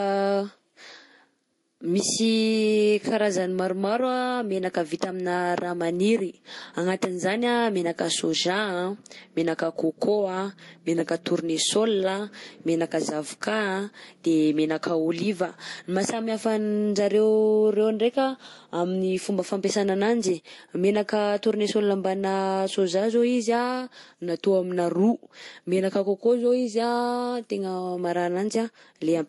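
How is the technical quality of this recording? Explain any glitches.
The recording carries a steady compression fault from start to finish: transcoding between lossy codecs, likely an MP3 stage followed by a Vorbis stage. Nothing in the speech reaches above 11.3 kHz, which fits a low-bitrate first pass that the second encoder could not restore. The second encoder also spent its limited bits re-coding the first one's artefacts while adding its own, so two distinct flavours of artefact sit together. That mix is what separates it from single-pass low-bitrate coding, which would give one consistent texture.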